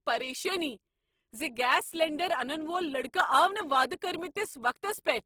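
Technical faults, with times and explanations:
Throughout, Opus compression: the speech has a rough, grainy texture, with voiced sounds turning noisy and papery rather than swirly, and no obvious holes in the spectrum. The likely cause is Opus in its music (CELT) mode, which keeps each band's energy but fills starved bands with folded or noise-like content. The damage is plainly audible, which fits a low rate around 16 kbps, yet the top end still reaches about 20.2 kHz.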